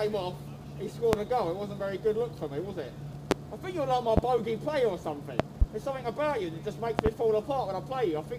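A loud pop hits at 1.13 to 1.16 s, then again at 3.31 to 3.34 s and 4.17 to 4.21 s. Each is one sharp crack, roughly 25 dB above the sound. From 5.40 to 5.65 s and 6.99 to 7.09 s the pops come as close pairs. The sound carries on underneath throughout. The likely cause is a sudden voltage pulse, such as static or a switching glitch, added to the signal and briefly shaped by the circuits that follow.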